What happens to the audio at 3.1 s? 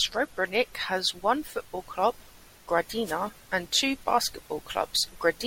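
A wireless microphone noise hit breaks into the speech from 3.04 to 3.16 s, lasting about 0.13 s. The analogue FM radio link between microphone and receiver dips for a moment as reflected copies of the signal arrive out of phase and cancel the direct one. With the carrier weakened, the receiver's own noise rises, so a short swish of static is heard before the signal recovers.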